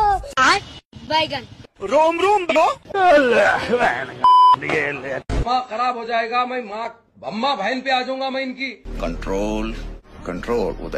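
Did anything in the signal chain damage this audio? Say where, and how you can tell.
Yes. At 0.75–0.84 s and again at 2.42–2.57 s the sound lurches forward, skipping about 50 ms and then about 200 ms. That is compressed frames skipped at the codec or storage stage. Whole frames went unplayed.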